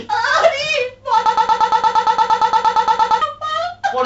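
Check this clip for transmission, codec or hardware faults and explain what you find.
There's one real fault: a broken-record loop in the speech from 1.26 to 3.22 s. A 116 ms slice repeats back to back 17 times, giving a stuttering, machine-gun buzz. The stream or decoder likely stalled and kept replaying its last fragment, so whatever belonged in that gap is lost. The G.722 wideband coding underneath, topping out around 7.8 kHz with a faint upper-band hiss, isn't a fault.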